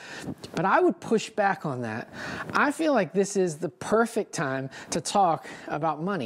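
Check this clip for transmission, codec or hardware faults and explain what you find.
Nothing here gives me anything to flag; I listened closely and there's simply no fault to report in this one.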